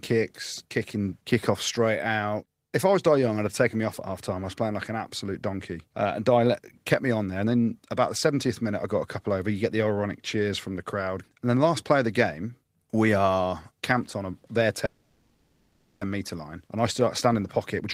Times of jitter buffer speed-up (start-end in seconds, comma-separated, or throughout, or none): 17.27-17.94